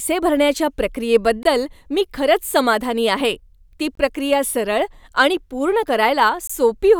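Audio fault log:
1.43–1.45, 3.95–3.97, 6.47–6.50 s: gap between chunks. Silence is left between chunks, leaving a hard-edged 21 ms hole every 2.5 s, before "मी खरंच समाधानी आहे" and after "खरंच समाधानी आहे ती". These show as flat waveform and blank vertical stripes.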